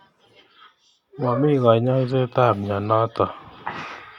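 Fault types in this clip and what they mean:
No technical faults can be heard in the speech recording. There is nothing to list under any fault type.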